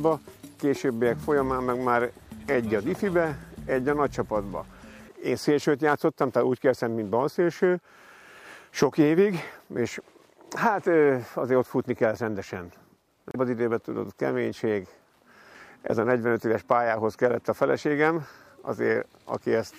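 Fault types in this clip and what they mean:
Damaged data in a compressed stream: 13.31 to 13.36 s, a brief blip where corrupted frames made the decoder lose sync and search for the next valid frame.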